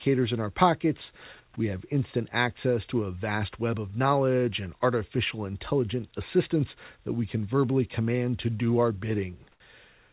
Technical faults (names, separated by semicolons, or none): comfort noise in place of the background